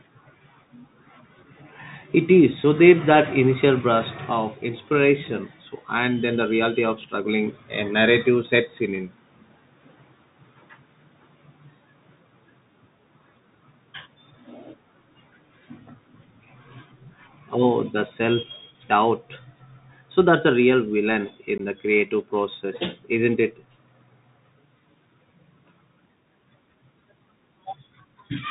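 Speech carried over a narrowband Bluetooth CVSD headset codec, whose one-bit-per-sample delta coding follows the waveform with an adapting step, a sound that fits a 64 kbps CVSD link. The result is plainly audible: nothing above 4 kHz, scratchy s sounds, distortion where loud high sounds outrun the step, and a granular hiss under the voice. Between 21.58 and 21.61 s there is also unconcealed Bluetooth headset packet loss. A couple of voice packets, about 15 ms of audio, never arrived and were filled with silence or an idle pattern, leaving a short hole with abrupt edges, followed by a moment of quieter speech as the codec recovers.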